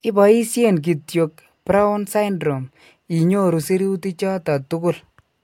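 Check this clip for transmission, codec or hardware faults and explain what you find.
Nothing in this speech clip points to a transmission, codec or hardware problem, so there's nothing here to flag.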